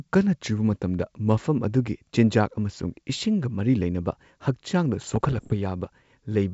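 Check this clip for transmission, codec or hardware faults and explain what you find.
One transmission fault stands out, near the end of the speech, carried over G.722 wideband coding. From 5.00 to 5.54 s there are bit errors on an ADPCM link. Around one percent of bits are flipped, and each error derails the decoder's step size and predictor. The result is a cluster of pops and rough bursts with abrupt level jumps. A waveform shows spikes and misshapen stretches, and a spectrogram shows broadband vertical streaks.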